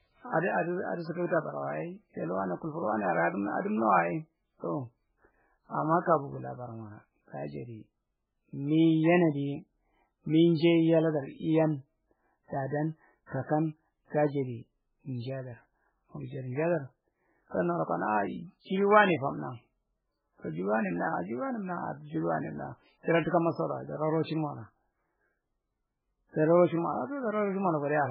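A speech clip carrying heavy codec damage throughout, with nothing above 5.2 kHz, watery, swirling artefacts and smeared onsets. That points to MP3 compression as the likely cause, at a bitrate around 8 kbps, where the encoder drops weak frequency lines frame by frame and cuts the treble outright. Pre-echo appears twice: a short hiss ahead of attacks from 1.27 to 1.30 s (38 ms) and from 13.26 to 13.32 s (54 ms). There the transform block spreads quantisation noise, scaled to the loud onset, into the quiet moment before it.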